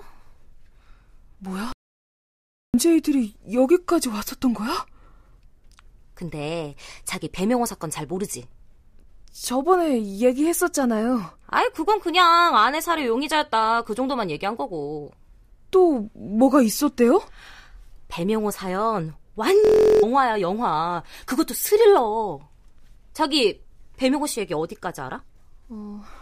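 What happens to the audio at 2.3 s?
The input was likely lost while recording carried on, giving an audio dropout to silence from 1.72 to 2.74 s: the speech vanishes into 1.01 s of dead, roomless silence.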